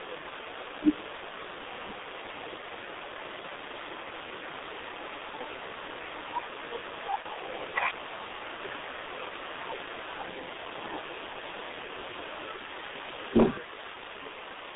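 Throughout, the speech sounds muffled and hoarse, confined to a narrow telephone band of roughly 300 Hz to 3.7 kHz with smeared consonants and heavy coding damage; this is the G.723.1 codec, a low-rate internet-telephony coder running near 6.3 kbit/s that models the voice coarsely in 30 ms frames. At about 7.22 to 7.26 s, the sound briefly turns into a stretched, fading smear before recovering; this is VoIP packet loss concealed by the speech codec, where one 30 ms frame went missing and the decoder filled the gap by extending its last pitch and filter shape at dropping gain.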